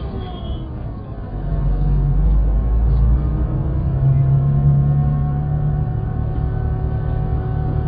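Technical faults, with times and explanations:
Throughout, AAC compression: the audio is dull and smeared, with nothing above about 4.9 kHz and a warbling, fizzy texture on sustained parts. The likely cause is heavy AAC-LC coding at a very low bitrate, near 10 kbps, where too few bits force a low cut-off and coarse quantisation of each frame. A spectrogram shows a hard flat ceiling at 4.9 kHz, with patchy holes and blotchy noise-like fill in the bands below it.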